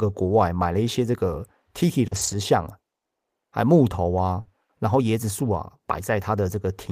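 At 2.07 s, a short concealed packet loss: about 40 ms never reached the decoder, which stretched the preceding sound to bridge it, leaving a brief smear. From 2.11 to 2.33 s, lost packets were rebuilt from error correction, with around 120 ms played from lower-bitrate copies, so that stretch sounds rougher and noisier. At 4.41 s, another short concealed packet loss fills a 40 ms hole the same way.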